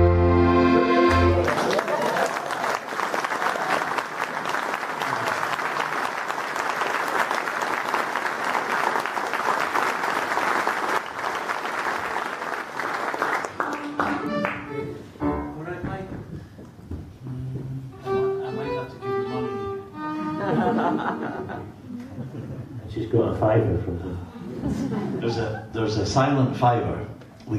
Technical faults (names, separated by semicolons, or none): none